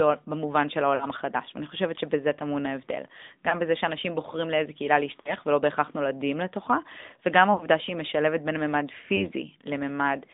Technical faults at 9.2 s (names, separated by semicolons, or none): AMR narrowband mobile codec; lost AMR speech frames